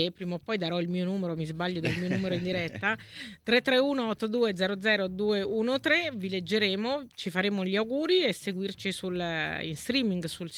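Nothing here trips any alarms; the clip just runs along without a single glitch, dropout or odd artefact turning up anywhere.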